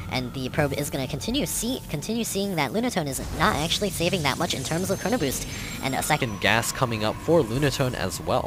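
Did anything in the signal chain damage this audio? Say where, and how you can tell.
Yes. From the start to 6.22 s the sound runs high and hurried, sped up by a factor of 1.27, which lifts the pitch by about four semitones; after 6.22 s it drops back to normal speed and pitch with an abrupt shift. This is a section at the wrong speed, likely from a sample-rate or clock mismatch at the editing or playback stage, where that stretch was read out at a faster rate than it was recorded.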